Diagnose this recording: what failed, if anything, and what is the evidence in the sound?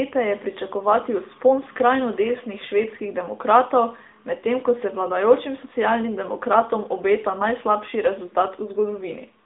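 The failure is at the codec stage: the whole recording has passed through the AMR narrowband mobile codec (AMR-NB). The speech occupies only about 250 Hz to 3.6 kHz, with nothing above 3.7 kHz. The codec damage is plainly audible as a buzzy, synthetic edge on the voice, which fits a mid-rate mode around 10.2 kbps. The codec rebuilds speech from a vocal-tract model excited by sparse pulses, so fine detail is lost.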